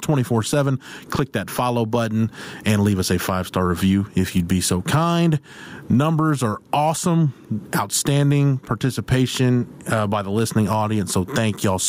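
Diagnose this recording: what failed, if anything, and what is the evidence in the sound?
Gain pumping runs throughout the speech. The gain is pulled down on every loud sound, a swing of around 20 dB, leaving the level squashed. The likely cause is input gain set far too high, with a fast limiter clamping each peak.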